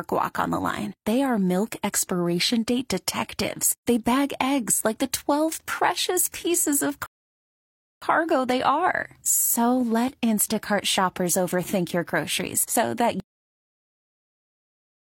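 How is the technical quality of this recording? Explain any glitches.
The speech has two playback glitches. At 7.06 s, after "precious pieces of", a rebuffering stall occurs. Playback ran dry and paused. About 0.96 s of silence is added before "they are" resumes seamlessly. At 13.2 s, after "overthink your groceries so", comes a cut-off end. The final buffers never played. The sound stops mid-stream and drops abruptly to digital silence with no decay.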